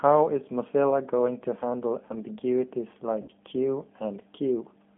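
G.729 codec damage runs through the whole clip. The 8 kbit/s coder rebuilds the speech from a vocal tract filter, a pitch predictor and sparse pulses, keeping only about 150 Hz to 3.5 kHz, so the voice sounds plainly rough and synthetic.

VoIP packet loss concealed by the speech codec occurs at 3.22 to 3.30 s. About 60 ms went missing, which fits three 20 ms packets. The decoder extended its last pitch and filter at falling gain, producing a brief buzzy or noisy, fading smear with weakened sound just after.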